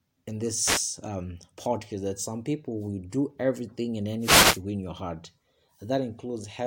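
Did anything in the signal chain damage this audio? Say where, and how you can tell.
Yes. Wireless microphone noise hits in the analogue radio link: static swishes at 0.59–0.85 s, before "um podcast that some", and 4.20–4.61 s, between "will do everything and" and "win your heart". The signal fades and receiver noise rises. Noise covers the sound rather than leaving the gaps of network dropouts.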